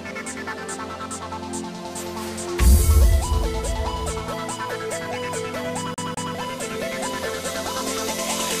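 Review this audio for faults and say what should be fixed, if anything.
From 5.94 to 6.35 s the sound stutters: a slice of about 203 ms plays twice in a row, with a brief mute at each jump, giving the quick, even hiccup of a skipping CD. This is the CD stuck on one turn fault, where a scratch or smudge makes the laser lose tracking and jump back one track, replaying the same spot. Preventing it means ripping from a clean disc with error-checking extraction and comparing against a verified checksum.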